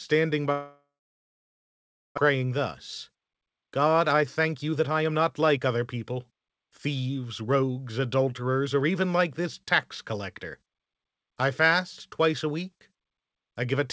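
From 0.52 to 2.2 s the audio stops, a long network dropout being the likely cause. The last sound is stretched into a brief fading buzz, then about 1.3 s of near silence follows. About 1 s of audio never returns, and what resumes has shifted by roughly 0.7 s.

Jitter buffer speed-up follows as the receiver drains that backlog by cutting short pitch-period pieces. From 2.29 to 2.59 s the audio runs about 110% fast, removing about 40 ms. From 3.10 to 7.63 s it runs 113% fast, removing roughly 0.7 s. The pitch holds, but the pace sounds hurried. Throughout, nothing above 8 kHz comes through, which fits the band limit of a G.722 call codec.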